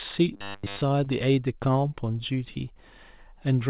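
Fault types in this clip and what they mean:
Robotic sound from repeated short buffers: Audio likely arrived too seldom, so playback kept replaying the last sliver of signal, which fits repeats about 10 ms long, while the real audio was skipped. From 0.34 to 0.84 s, most of the sound becomes a rigid metallic buzz at 100 Hz.
Short concealed packet loss: Twice, 20 ms of the call failed to reach the decoder in time, and the receiver patched each gap by extending the preceding sound before blending back. Near 1.04 s and 2.54 s, this comes across as a brief smear or wobble.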